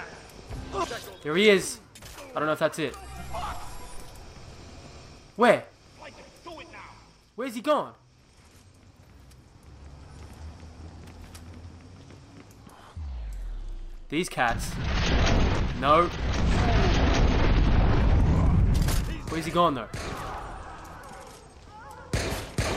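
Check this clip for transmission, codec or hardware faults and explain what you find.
No transmission, codec or hardware faults are audible here.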